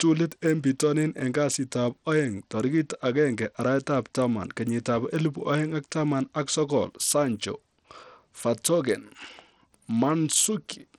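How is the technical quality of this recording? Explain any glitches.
The technical quality is poor throughout: the treble on the speech flickers and drops out, and a gritty, grainy noise with aliased edges rides on it. This is likely Bluetooth SBC compression, starved of bits so its upper sub-bands go empty, which fits a low bitrate near 80 kbps.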